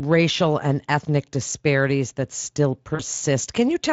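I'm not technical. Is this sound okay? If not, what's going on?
No. At 2.95 to 3.03 s there is VoIP packet loss concealed by the speech codec: about 40 ms of speech, which fits two lost frames, never arrived, and the decoder filled the gap by stretching the last sound into a brief, fading buzz or noise before recovering.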